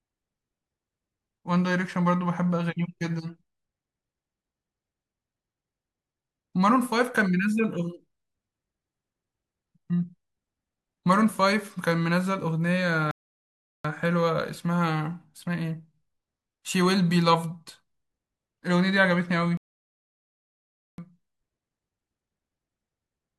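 The speech cuts out twice in playback stalls: at 13.11 s it drops to silence for about 0.73 s, then at 19.57 s for about 1.41 s, resuming at 20.98 s. The player likely starved of data or had its thread blocked each time.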